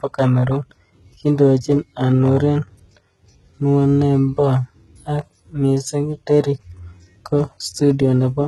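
HE-AAC compression runs throughout this speech clip, heavily. Nothing survives above about 11.8 kHz, and the treble sounds synthetic: it is likely rebuilt by spectral band replication, copying lower bands upward, so harmonics misalign and s sounds turn gritty and metallic, pointing to roughly 16 kbps.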